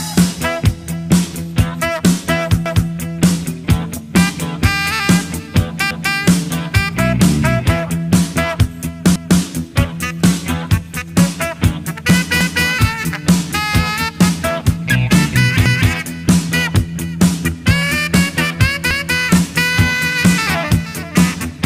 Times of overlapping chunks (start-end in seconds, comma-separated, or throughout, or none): 2.66-2.91, 5.91-6.16, 9.16-9.41, 12.41-12.66, 15.66-15.91, 18.91-19.16